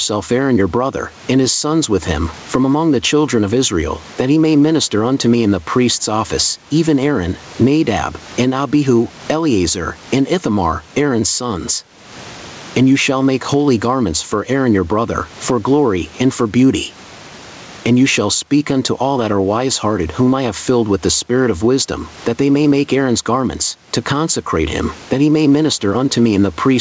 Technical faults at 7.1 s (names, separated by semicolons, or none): gain pumping